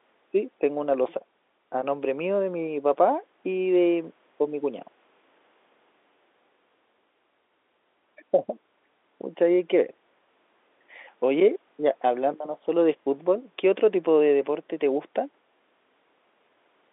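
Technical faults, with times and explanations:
No technical faults are audible anywhere in this speech.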